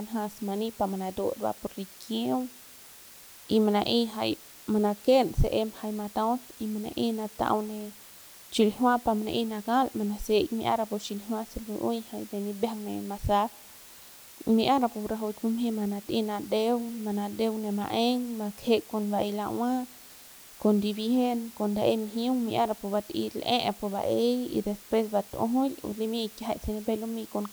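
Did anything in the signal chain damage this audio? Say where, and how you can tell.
Yes: low bit depth with dither at sample-format conversion. Seven bits give constant hiss about 20 dB below the speech, not undithered, signal-tracking grit.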